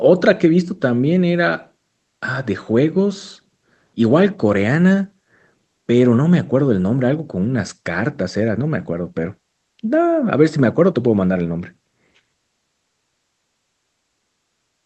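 Nothing here stands out as a fault, just speech that has come through an ordinary call connection, with the top end rolled off around 8 kHz the way that kind of link normally sounds.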